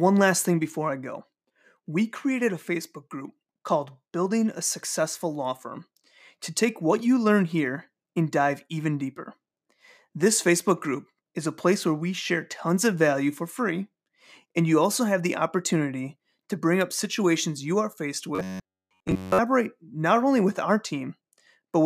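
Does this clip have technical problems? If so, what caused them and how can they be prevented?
Yes. From 18.35 to 19.39 s there is robotic sound from repeated short buffers, most likely because new audio stopped arriving in time and the playback software kept replaying its last fragment, about 10.7 ms long, while the real audio was skipped. Essentially every moment of that stretch is a repeat, so the sound becomes a rigid, metallic buzz fixed at 93.8 Hz. Preventing it means giving the stream a larger jitter buffer and a more reliable connection so fresh audio always arrives before the buffer runs dry.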